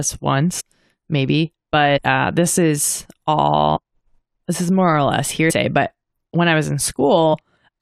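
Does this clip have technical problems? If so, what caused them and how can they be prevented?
Yes. At 0.59, 1.96 (just before "uh this is"), 3.75, 5.49 (right after "is more or less") and 7.33 s the speech lurches forward, dropping roughly a tenth to a fifth of a second of speech each time. The joins are soft, smeared blips, not sharp clicks. This is compressed frames skipped: whole 23.2 ms codec frames, here about four to ten in a row, were missing or rejected as damaged, and the overlap between neighbouring frames blurs each splice. To prevent it, verify file integrity after transfer and use a transport with error correction or retransmission so damaged frames are restored, not discarded.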